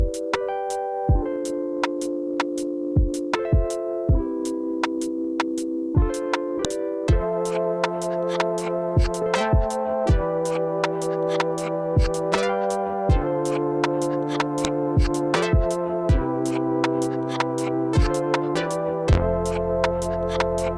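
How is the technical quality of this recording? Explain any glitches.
Two sharp clicks stand out, at 6.65 s and again at 14.65 s, exactly 8 s apart. That's the classic file header played as audio: the recording looks to have been stitched together from 8-second WAV pieces without stripping each piece's header, so those few dozen bytes of metadata get read as sample values. The result is a brief, loud snap at each join that cuts through regardless of what the sound is doing there.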